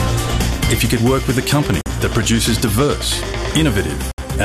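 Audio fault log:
1.81–1.86 s and 4.11–4.18 s, gap at a join of encoded pieces: the sound drops out abruptly for about 47 ms and then about 68 ms, with edges smeared by the codec, and resumes exactly where it left off. Each point is where two separately encoded pieces were butted together untrimmed, so the encoder's start-up delay and the padding in the previous piece's final frame both remain as silence in the otherwise continuous audio.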